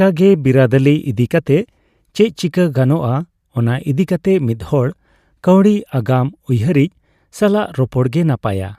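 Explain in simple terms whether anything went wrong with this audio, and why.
Nothing went wrong with this speech recording: the signal stays steady and continuous throughout, with no interruptions, level problems or added disturbances that a listener would notice.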